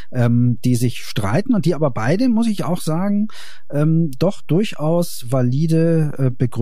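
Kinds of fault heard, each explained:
DC offset: Nothing in the speech itself sounds different, because a constant shift carries no audible vibration. What changes is the waveform's resting point, which sits well away from zero throughout, at about -24 dBFS, instead of centring on silence. That fixed displacement eats into the available headroom, so peaks reach the ceiling sooner, and on a spectrum it appears as a steady line of energy at 0 Hz, present from start to finish.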